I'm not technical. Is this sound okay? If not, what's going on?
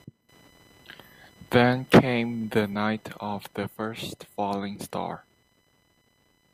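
No. Under the speech, from start to finish, there's a faint high buzz, like a whine or chirp pulsing roughly a thousand times a second. This is computer activity noise: the computer's working parts disturb the audio circuit's shared electrical ground and leak into the recording.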